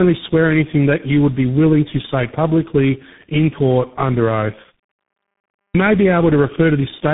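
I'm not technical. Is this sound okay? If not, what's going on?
No, it isn't. The whole clip has tandem speech coding. The call passed through four speech coders in a row, each squeezing the speech again. Nothing above 3.7 kHz survives, so it sounds muffled, rough and warbly throughout.

There is also a clipped start after a pause at 5.65 s. After about a second of silence, the playback device was slow to wake up. Roughly the first tenth of a second went missing, so "may be" starts abruptly.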